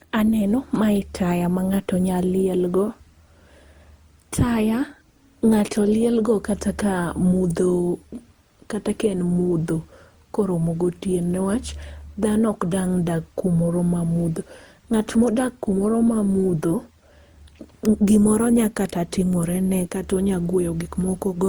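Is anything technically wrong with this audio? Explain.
Yes. Generation loss affects the whole clip. The speech was likely decoded and re-encoded with a lossy codec around ten times, each pass requantising on a shifted frame grid, so noise piles up. The sound is swirly, smeared and hollow, worse than the single Opus-like pass near 64 kbit/s that the texture suggests, and consonant attacks are blurred.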